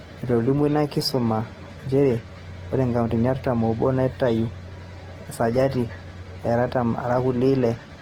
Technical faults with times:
0.00-8.01 Opus compression

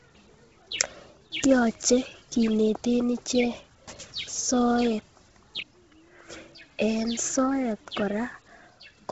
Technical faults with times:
0.00-9.11 Bluetooth LC3 compression

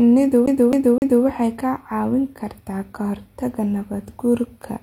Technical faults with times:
0.46-1.24 CD stuck on one turn

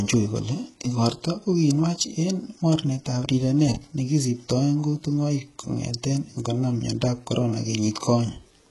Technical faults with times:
0.00-8.71 HE-AAC compression

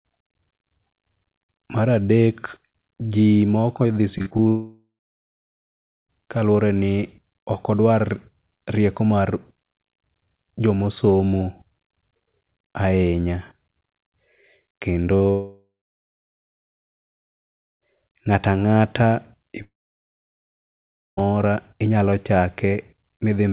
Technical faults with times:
4.18-4.40 repeated packet loss (robotic sound)
4.48-6.10 long network dropout
15.16-15.22 short concealed packet loss
15.30-17.83 long network dropout
19.62-21.19 long network dropout

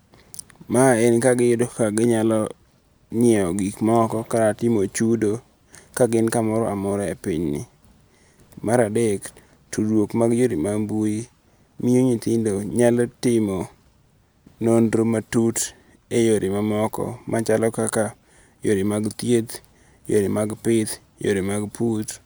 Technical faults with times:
none

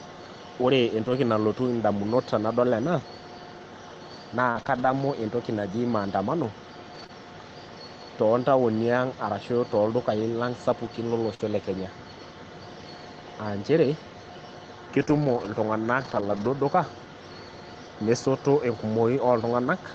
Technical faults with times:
1.05-1.11 lost packet rebuilt from error correction
4.51-7.11 scattered short gaps
11.35-11.41 burst of packet loss
11.39 lost packet rebuilt from error correction
14.97-15.50 lost packet rebuilt from error correction
15.05-15.08 short concealed packet loss
16.00-16.50 lost packet rebuilt from error correction

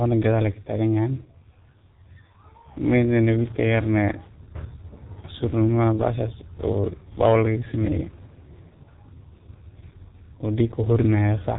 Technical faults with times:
0.00-11.59 G.723.1 codec
3.74 hard clipping

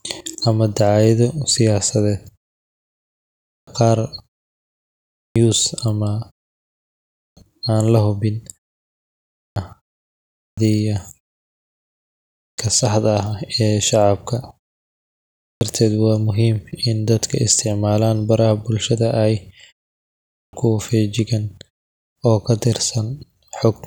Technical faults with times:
3.22-3.67 clipped start after a pause
4.90-5.36 clipped start after a pause
6.91-7.37 clipped start after a pause
9.10-9.56 clipped start after a pause
10.03-10.57 clipped start after a pause
12.03-12.58 clipped start after a pause
15.13-15.61 clipped start after a pause
20.01-20.53 clipped start after a pause

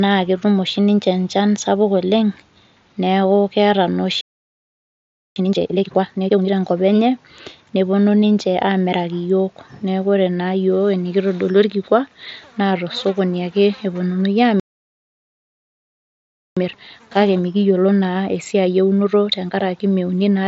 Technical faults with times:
4.21-5.36 playback stall
5.36-6.50 time-compressed catch-up
14.60-16.57 playback stall
16.57-19.57 time-compressed catch-up

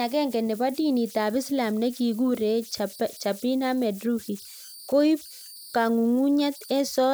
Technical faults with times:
0.00-7.13 converter idle tones

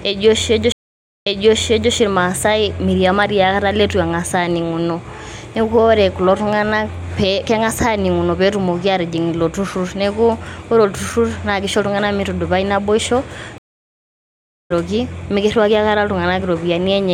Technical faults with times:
0.72-1.92 stream reconnect
13.58-14.72 stream reconnect

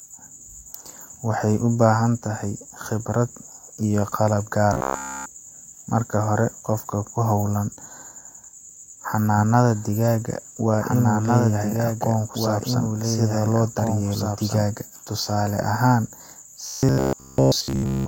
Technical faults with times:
4.73-5.26 robotic sound from repeated short buffers
9.37-14.63 doubled audio track
16.66-18.07 robotic sound from repeated short buffers

